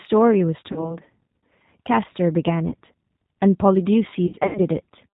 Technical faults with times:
0.00-5.14 G.729 codec
0.72-0.97 VoIP packet loss concealed by the speech codec
2.68-2.74 VoIP packet loss concealed by the speech codec
4.27-4.61 VoIP packet loss concealed by the speech codec

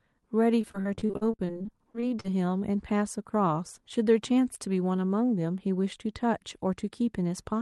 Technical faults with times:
0.61-2.26 repeated packet loss (robotic sound)

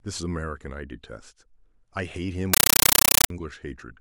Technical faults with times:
2.53-3.30 compressed stream played as audio

